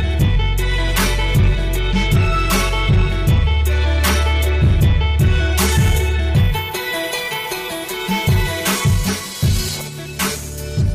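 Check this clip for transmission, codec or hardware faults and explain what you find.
Nothing wrong can be heard anywhere in this clip.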